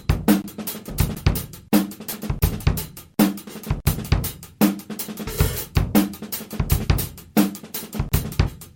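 Compressed frames skipped at 0.89, 2.12, 3.49, 5.27, 6.83 and 8.46 s: whole frames go missing, so the audio jumps forward by roughly 50 to 150 ms, which fits 10 ms frames. Each join is heard as a sudden jump ahead.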